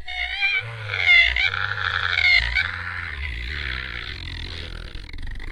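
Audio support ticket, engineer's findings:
Repeated frames, 1.86–2.05 s. Audible stutter: a 92.9 ms block of sound replays twice more before playback moves on. Block length fits about two compressed frames. Probable component: encoder output or transport layer writing or sending the same frames again. The decoder plays each copy faithfully, adding 185.8 ms to the total duration.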